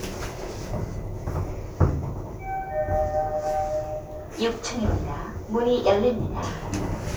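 From 0.0 to 1.5 s there is sample clock jitter: the converter's clock wanders, so each sample is captured a few microseconds early or late, on the order of several microseconds. Steep, fast-moving parts of the waveform suffer most, leaving a grainy hiss about 25 dB below the sound that swells on loud, bright moments. A spectrogram shows a diffuse noise haze tracking transients and high-frequency energy; the waveform looks slightly fuzzed on steep edges.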